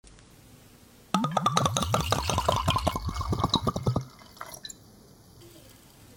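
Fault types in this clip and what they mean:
Channel delay (comb filtering): one channel lags the other by about 0.2 ms, leaving a fixed hollow notch near 3 kHz; flanging's notches would sweep instead.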